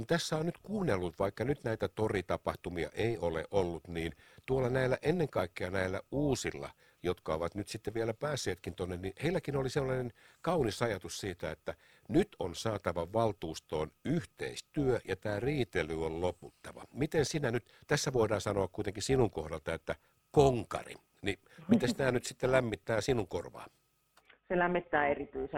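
Windowed frames in this speech recording were reassembled with an overlap that does not sum to a constant gain, causing overlap-add ripple throughout: the level swings by about 6 dB once per frame, around 300 times a second, producing a metallic buzz.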